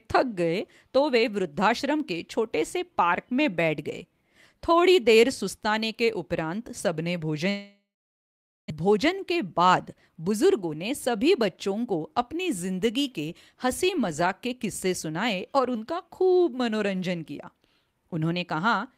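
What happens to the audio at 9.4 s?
At 9.4 s you're in the middle of a jitter buffer speed-up running from 8.80 to 11.15 s. The receiver had built up too much delay, so it kept snipping out short pitch-period chunks, roughly 150 ms in all. The speech plays about 6% fast at unchanged pitch and sounds a bit rushed.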